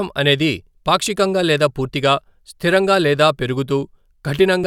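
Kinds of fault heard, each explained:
No faults can be heard in this recording.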